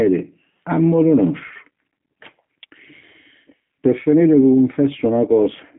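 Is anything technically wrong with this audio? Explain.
Yes. G.729 codec damage runs throughout. The speech is rebuilt from a vocal tract model and sparse pulses, which fits 8 kbit/s. It sounds rough and synthetic, with nothing above about 3.8 kHz.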